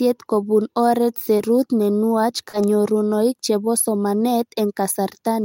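Short concealed packet loss occurs twice in this speech. From 1.37 to 1.41 s, between "kopun oret" and "ne nuach", about 20 ms never arrived and the decoder synthesised a stand-in. From 2.49 to 2.55 s, just after "ne nuach", 40 ms were lost and patched the same way. Each gap sounds like a brief smear or wobble. On a spectrogram the harmonics flatten or blur into a short noisy smudge before rejoining.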